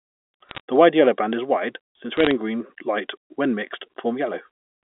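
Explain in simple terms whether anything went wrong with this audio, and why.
Two short bursts of crackle, from 0.49 to 0.60 s and from 2.17 to 2.31 s, are bit errors on a digital phone line. This telephone-band speech was sent as digital numbers, and a few of those bits flipped, roughly a fraction of a percent. Each flipped bit spoils a single sample, and a flip in a high bit gives a sharp tick. Unlike dropped packets, the speech never goes silent or stutters; the ticks simply sit on top of unchanged speech.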